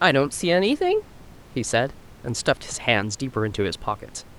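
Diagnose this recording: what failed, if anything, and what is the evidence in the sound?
Nothing in this speech recording points to a failure at any stage of the chain. The only background is the room's own noise, sitting about 25 dB below the speech, which belongs to the space around the microphone rather than to the system.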